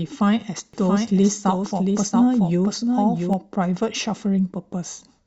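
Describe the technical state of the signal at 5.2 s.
At 5.2 s the speech signal is intact, with no audible dropout, distortion, noise burst or other fault at that point.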